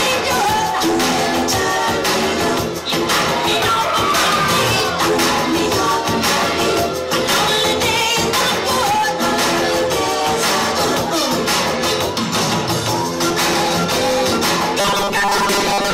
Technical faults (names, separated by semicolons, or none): robotic sound from repeated short buffers